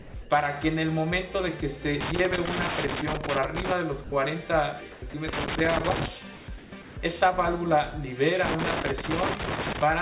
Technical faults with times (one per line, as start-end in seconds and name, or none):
0.00-0.14 sound dropped by the voice detector
0.22-0.30 comfort noise in place of the background
2.01-3.72 loose connector crackle
4.04-4.12 sound dropped by the voice detector
4.92-5.14 sound dropped by the voice detector
5.28-6.09 loose connector crackle
6.36-6.96 comfort noise in place of the background
8.45-9.82 loose connector crackle